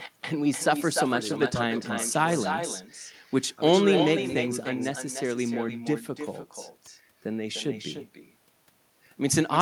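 Throughout the speech, an echo with no canceller is present: the far end's loudspeaker output re-enters its microphone and returns uncancelled after roughly a third of a second. Each phrase is trailed by a thinner copy about 8 dB below the direct speech.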